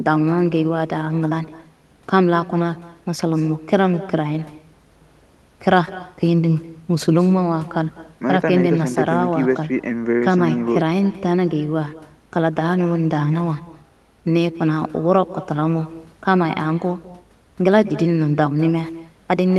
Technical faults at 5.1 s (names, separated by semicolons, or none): echo with no canceller